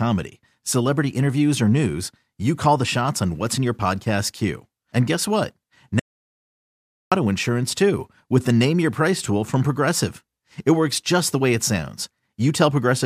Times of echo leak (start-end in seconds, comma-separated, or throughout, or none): none